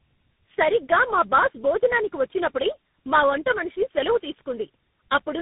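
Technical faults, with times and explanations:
throughout, tandem speech coding: the call was decoded and re-encoded at each link, which points to about three speech coders in a row, such as G.729A, GSM full rate and CVSD. Each stage compounds the last stage's errors, leaving speech rough, warbly and muffled, with nothing above 3.8 kHz.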